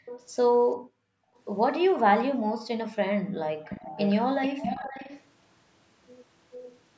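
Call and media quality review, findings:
Background gated by the echo canceller: near-end suppression clamps the mic hard while the far end plays, so room tone drops by about 40 dB (about 35 dB at 2.36–2.41 s). Brief dips at 0.00–0.06 s and 3.23–3.42 s, a longer hole at 0.77–1.37 s.

Echo leak: residual far-end echo, likely from an echo canceller at a loudspeaker endpoint not removing all of what its mic picked up, returned about 445 ms late. Heard at 0.06–0.26 s, 3.64–4.17 s, 4.42–5.22 s and 6.52–6.78 s, ranging from about 20 dB to about 10 dB below the speech, strongest around 4.4–5.2 s.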